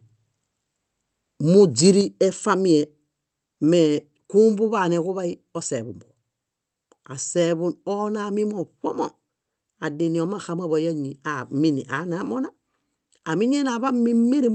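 Microphone volume stepped down, at 2.01 s: the speech and its background drop together by about 5 dB in a single abrupt step and stay at the lower level afterwards. The likely cause is the call software's automatic gain control judging the input too hot and cutting the microphone's input volume at once, rather than a change in how loudly anyone spoke. Through the call path, whose top end stops near 8 kHz in a way that points to Opus at a modest bitrate around 32 kbps, the step stands out as a sudden shift in level.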